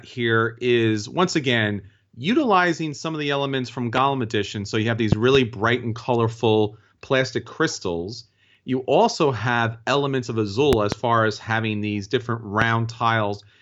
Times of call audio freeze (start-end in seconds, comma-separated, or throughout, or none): none